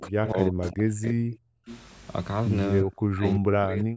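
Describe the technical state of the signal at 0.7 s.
At 0.7 s the sound is pulled down in level. Across the span from 0.0 to 1.69 s, roughly a second in total is affected, with the deepest drop around 40 dB. This is speech suppressed in double talk, likely because far-side audio was playing through the loudspeaker while this side spoke. The echo canceller could not tell the local talker apart from the loudspeaker echo, so it attenuated both together.

Over 0.63 to 0.71 s, a brief delayed copy of the voice sounds through, arriving about 340 ms late and sitting around 15 dB below the speech. This is an echo leak, likely from the loudspeaker side's echo canceller failing to fully remove what its microphone picked up from the speaker, so a short fragment of that played voice was sent back into the call.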